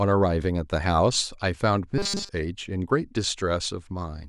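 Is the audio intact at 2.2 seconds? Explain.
No. From 1.98 to 2.30 s the speech becomes robotic, a rigid metallic buzz at 200 Hz. This is likely robotic sound from repeated short buffers: audio arrived too slowly, so a fragment of about 5 ms was replayed throughout while real audio was skipped.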